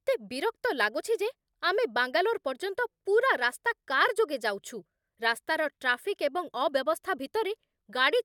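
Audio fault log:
Nothing stood out on listening to this speech recording.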